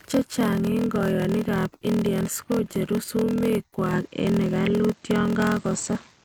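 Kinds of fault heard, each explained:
Block size mismatch (padded): Each block arrives short and the leftover space gets zero-filled, so the speech carries a steady 41.7 Hz buzz from the gaps and plays about 11% slow (0.889x) at roughly normal pitch, which fits 1024-sample blocks read as larger ones.
Input switched to a poorer device: At 3.93 s the sound turns duller with no gap, the level shifts by about 5 dB, and a new noise floor appears roughly 40 dB down. That's likely a switch to a poorer microphone or headset.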